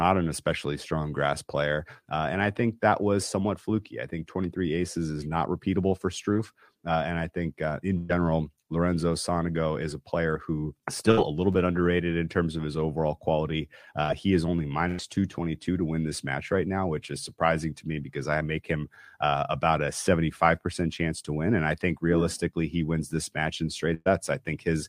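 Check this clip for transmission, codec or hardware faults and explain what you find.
Six dropouts from lost network packets are audible, one short and five longer.

Short concealed packet loss, 6.33 to 6.37 s: about 20 ms never arrived, so the decoder extended the preceding sound and blended back. It leaves only a brief smear, too short for any fade.

Burst of packet loss at 7.97 to 8.11 s, 11.11 to 11.19 s, 14.03 to 14.10 s, 14.88 to 15.00 s and 23.94 to 24.08 s: 60 to 120 ms went missing each time. Concealment held the last sound as a decaying buzz or hiss before speech resumed further on. At 23.94 s the fill fades into about 20 ms of silence. The length and audible decay are what distinguish these bursts from the short loss.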